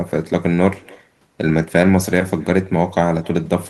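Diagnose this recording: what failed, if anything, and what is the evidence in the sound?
Echo with no canceller, present throughout the speech: every phrase is trailed roughly a third of a second later by a faint, thin copy of itself, sitting about 29 dB below the direct sound. This is a call-processing failure. The far end is playing the call over a loudspeaker, its microphone picks that playback up, and no echo canceller subtracts it, so the talker's own voice returns after the network round trip.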